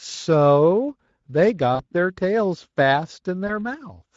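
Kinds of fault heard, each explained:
Speex codec: The speech passed through the Speex CELP codec at a middle-quality setting, which fits a rate near 17 kbps. The encoder has too few bits to describe the excitation that drives its vocal-tract filter, so the speech comes out with a plainly audible coarse, grainy texture. That roughness sits on every syllable for the whole clip rather than at particular moments.
VoIP packet loss concealed by the speech codec: Packets went missing and the Speex decoder filled each gap by extending its last pitch and spectral shape with gain reduced frame by frame. From 1.75 to 1.83 s about 40 ms is concealed, which fits two lost frames. From 3.47 to 3.52 s about 20 ms is concealed, which fits one lost frame. Each spot becomes a smeared stretch that fades.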